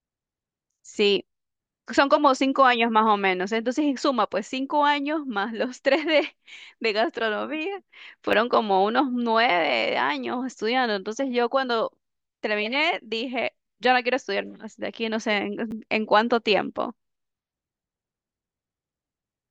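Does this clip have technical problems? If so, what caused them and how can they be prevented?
Yes. A repeated buffer occurs at 8.32 s and again at 15.71 s. Each time, fresh audio failed to reach the playback device on schedule, so it replayed the last block once more. The repeated slice is very short, which fits a 10 ms buffer, so it comes across as a brief click or buzz in the speech, with a hard join and about ten milliseconds of real audio lost. To prevent it, enlarge the playback buffer or reduce the processing load so new audio always arrives before the device needs it.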